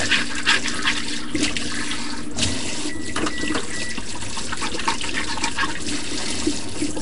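A recording of everyday sounds carries two faults from start to finish. A DC offset shifts the whole waveform off zero, wasting headroom; unlike hum or rumble, it has no audible pitch, just a steady component at 0 Hz. The sound also has a rough, hissy halo and a smeared, underwater quality, with nothing above 10.6 kHz. This likely comes from Nellymoser compression at a rate near 44 kbps. Noise fills the weak bands, which sets it apart from ordinary low-bitrate MP3 swirl.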